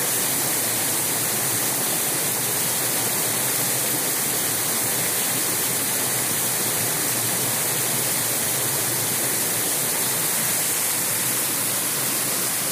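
No technical faults are audible anywhere in the recording.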